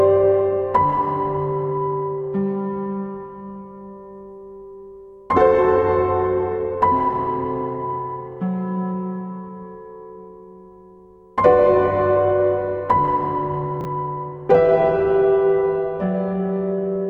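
A brief jumbled stutter occurs from 13.81 to 13.85 s. This is chunks out of order: one 10 ms chunk of audio was written three chunks late, so it plays after material that should follow it. Nothing is missing, but the sequence is scrambled and there are three abrupt joins.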